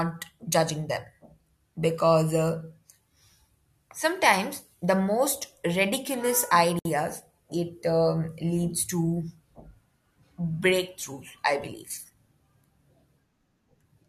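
At 6.79 s, just after "sometimes the most ridiculous", separately encoded pieces were joined untrimmed, leaving encoder delay and frame padding in place. This gap at a join of encoded pieces cuts a 61 ms gap with smeared edges, then the speech resumes at 6.85 s.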